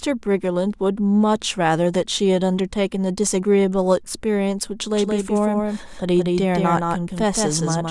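From 4.93 s to the end, the speech has a doubled audio track. A second full-band copy runs about 150 ms behind the original. It sits roughly 5 dB quieter. The copy has no decay and no room colour, so it sounds like a hard, flat slapback rather than an echo. It switches on abruptly at 4.93 s and never stops. The likely cause is the same signal being captured twice, once through a slower path.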